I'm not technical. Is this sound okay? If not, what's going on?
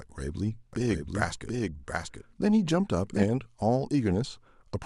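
No. A doubled audio track runs from about 0.73 to 3.23 seconds: the same speech is heard twice, with a second copy trailing roughly 0.7 seconds behind the first and a bit quieter. Unlike a natural echo, that copy doesn't fade away or sound roomy, and it cuts in and out suddenly at those two points. The likely cause is the sound being recorded a second time through a slower route, or an edit leaving two misaligned copies.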